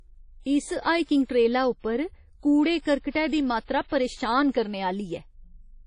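Low-bitrate lossy encoding, most likely WMA compression at a rate that fits roughly 32 kbps, affects the whole of this speech recording. The transform encoder has too few bits, so it throws away everything above 10.1 kHz and coarsely quantises what remains. The codec damage is plainly audible from start to finish: the speech sounds dull and washy, with a ringing smear around sounds and a hiss that swells and fades with the signal.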